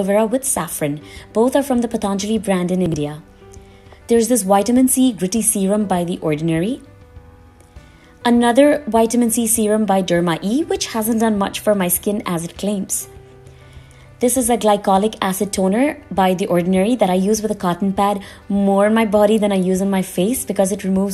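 At about 2.86 s there's a short stretch of chunks out of order, lasting until roughly 2.94 s. Within that 80 ms window a 20 ms slice of audio plays after the material that should have followed it, which fits one chunk turning up about three chunks late. Nothing actually goes missing, but the sequence is shuffled, leaving three abrupt splices close together. You hear it as a brief jumbled stutter.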